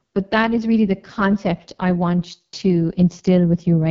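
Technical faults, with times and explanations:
Throughout, AMR wideband (HD Voice) codec: the speech is rough and raspy, with nothing above 7.4 kHz, as a starved vocal-tract model fits the lowest 6.6 kbit/s mode.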